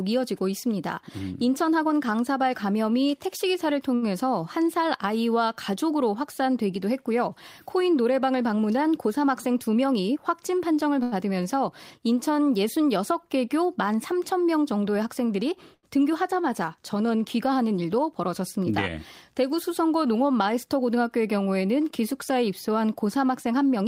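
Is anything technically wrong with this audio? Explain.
Yes, the speech has two kinds of network playback fault.

A short stall from a late packet occurs at 3.95–4.04 s, 11.03–11.14 s and 15.74–15.85 s. Each time the jitter buffer ran dry, so the last sound was stretched by 67, 90 and 85 ms, leaving a held, slightly buzzy syllable with nothing lost.

A jitter buffer speed-up occurs at 9.06–10.17 s, running at 106%, and at 17.82–18.66 s, running at 108%. Pitch-period slices totalling around 70 ms were cut each time to reduce delay, so the speech sounds briefly hurried at unchanged pitch.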